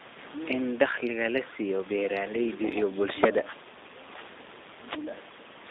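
From start to end, the speech carries G.729 codec damage: a rough, buzzy, slightly synthetic texture, with the line band narrowed to 200 Hz to 3.7 kHz. Unlike simple telephone filtering, the room noise, about 21 dB down, warbles, which fits an 8 kbit/s G.729A coder rebuilding the sound from pulses.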